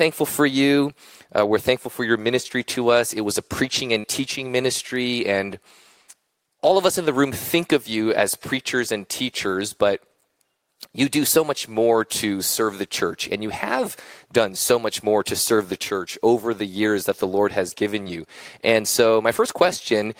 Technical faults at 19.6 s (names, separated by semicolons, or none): none